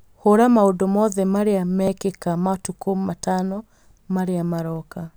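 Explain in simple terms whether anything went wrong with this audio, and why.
At 1.88 s there is one small skip: between "maũndũ mothe marĩa" and "matukũ matano" the sound jumps forward slightly, as if a tiny sliver, roughly 15 milliseconds, had been snipped out and the two ends pushed together with no pause. This is audio missing between chunks. The likely cause is a recorder handling the sound in 2-second blocks and briefly dropping a piece while switching from one block to the next.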